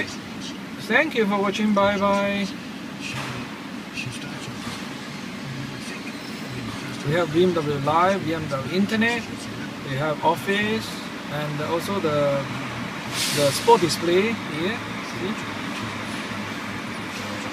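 No technical faults can be heard anywhere.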